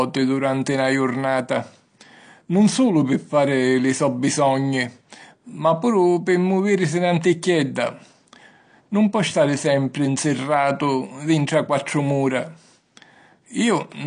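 From start to finish the speech is band-limited, with nothing above 9.8 kHz, and sounds dull and smeared, with warbling on sustained sounds and fizzy sibilants. The likely cause is AAC compression, AAC-LC at a low bitrate, consistent with around 32 kbps.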